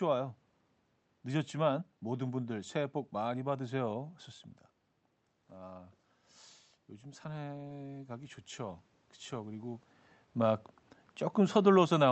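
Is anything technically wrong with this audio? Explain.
Yes. From 7.0 to 9.9 s there is automatic gain rising. The level arriving at the microphone drops by about 13 dB, and the automatic gain control responds by slowly increasing its gain, by about 4 dB over nearly three seconds. Because the whole signal is amplified, the speech and the room noise behind it swell together, so the background audibly grows along with the voice instead of staying steady. The boost only partly makes up for the drop in input level. The band-limited, coded character of the audio fits a call path with a wideband codec cut off near 8 kHz.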